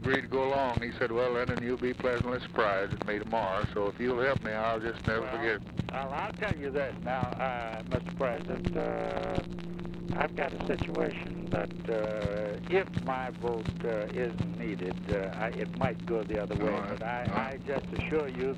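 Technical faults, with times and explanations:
8.34 to 11.83 s, overlap-add ripple. The sound breaks into a harsh, buzzing flutter at around 150 Hz. The audio was processed in short windowed frames and joined back with overlaps whose gains do not add to a steady total. The level swings by about 60 dB every frame. The troughs nearly silence the signal, so the fast pulsing reads as a rough, robotic tremolo rather than a gentle wobble.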